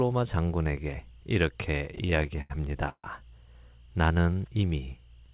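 From 1.78 to 3.06 s the speech drags and stutters through 14 brief holds, the longest 146 ms, repeated stalls (stutter) as late packets drain the jitter buffer and the receiver stretches the last sound, about 29% of that span, with nothing lost. Everything is limited to below 4 kHz, consistent with G.711 on the call path.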